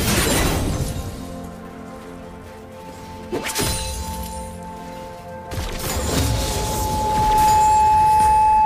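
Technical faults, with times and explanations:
5.83–8.66 s, loudspeaker feedback squeal: the microphone re-amplifies its loudspeaker with loop gain above one at 863 Hz, so a steady tone swells over a second and a half to about 10 dB above the sound. Spectrogram: one bright horizontal line; waveform: envelope climbing into a dense block.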